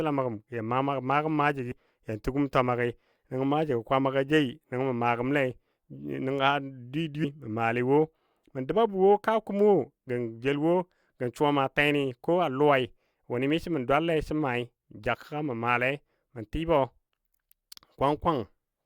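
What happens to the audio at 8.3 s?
Nothing goes wrong at 8.3 s; the speech carries on intact through that moment, with no dropout, click or distortion.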